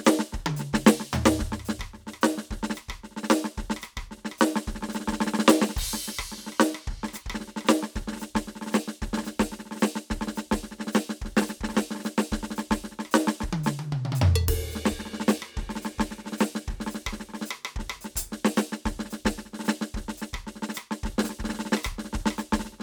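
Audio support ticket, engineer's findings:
Music signal checked through its whole duration, with no audible transport, level or processing fault found and nothing to escalate.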